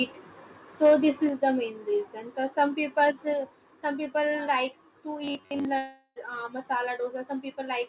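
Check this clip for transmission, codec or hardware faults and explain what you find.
Four kinds of fault are present. The audio is band-limited to 4 kHz, which fits a narrowband G.711 mu-law call path, but that is expected for such a link and is not a fault.

Microphone overload occurs at 0.84 to 0.94 s and again at 3.02 to 3.04 s. The peaks exceed full scale by about 4 dB and then about 2 dB. The flat-topped waveform is likely caused by input gain set too high, so the converter ran out of range. The first event clips about a tenth of its samples. The second is lighter. Both add a harsh, crackly edge to the loudest moments.

The microphone volume steps down right after each overload. The first step comes at 1.29 s and drops the level by about 6 dB. The second comes at 3.33 s and drops it by about 3 dB. The call software likely has automatic gain control that reacts to the clipping by cutting the input level in one move. 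Speech and background fall together, abruptly, with no fade.

Robotic sound from repeated short buffers runs from 5.24 to 5.65 s. Most of that stretch is replaced by repeats of a tiny slice of audio. The repetition imposes a buzz at 93.8 Hz, which fits a buffer of about 10.7 ms being replayed while fresh packets arrive too rarely. The speech becomes a stiff, metallic drone that only loosely tracks the original contour.

A long network dropout follows at 5.78 to 6.18 s. About 380 ms of audio likely never arrives. The receiver conceals about 376 ms of that gap by extending the last sound, which then fades. About 20 ms of near silence comes next. Speech then resumes further along, and the lost portion is simply gone.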